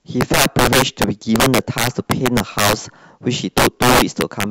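Integer overflow runs through the whole speech clip. The signal is pushed about 12 dB past full scale, and the arithmetic does not limit it. Instead, each peak that exceeds the largest integer wraps around to the opposite extreme. A few percent of samples are affected, all on the loudest moments. Each wrap throws the waveform across the full range in a single step. The result is a harsh, violent crack on every strong peak, far sharper than ordinary clipping.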